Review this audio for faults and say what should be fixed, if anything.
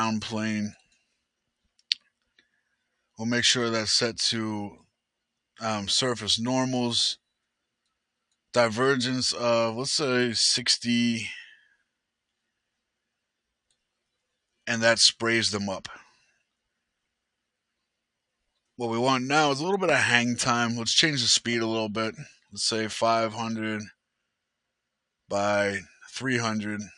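The noise suppressor mistook wanted sound for noise and turned it down: sound cut by the noise suppressor at 0.75–1.24 s, 11.55–11.88 s, 22.32–22.53 s and 25.86–26.03 s, dipping by about 21, 22, 15 and 11 dB. Set the suppressor less aggressively or train it on this material so it stops treating wanted sound as noise.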